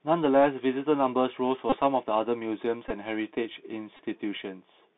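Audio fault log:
Throughout: Bluetooth CVSD headset codec. The sound is confined to a narrow line band of roughly 150 Hz to 3.7 kHz, as if passed through a phone link. The damage is plainly audible. The one-bit up/down encoder, consistent with a 64 kHz bitstream, adapts its step size too slowly for fast loud high content. Sibilants come out scratchy and slope-overloaded, and a granular hiss sits under the speech.
1.70–1.77 s, 2.88–2.91 s, 3.97–4.02 s: Bluetooth headset packet repeated. At each of these points the headset link dropped voice packets, and the decoder replayed the last good packet's bits in their place. Because the same short chunk repeats every 3.75 ms, each run turns into a steady buzz near 267 Hz. The first run covers about 26 ms of lost audio and the later two about 19 ms each, which fits runs of roughly seven and five packets.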